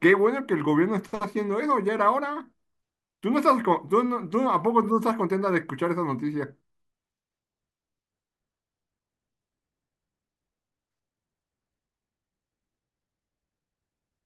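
No audible technical faults.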